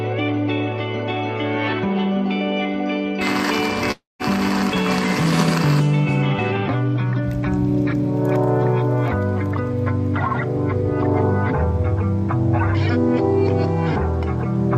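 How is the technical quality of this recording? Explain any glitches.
There's one glitch: a long network dropout from about 3.91 to 4.22 s. The audio turns into a smeared, buzzy continuation of whatever came just before and fades down to about 170 ms of near silence. It then picks up again further along, with about 280 ms of material simply gone. That's likely a receiver that stopped getting packets and stretched the last bit of sound to cover the gap until it gave up.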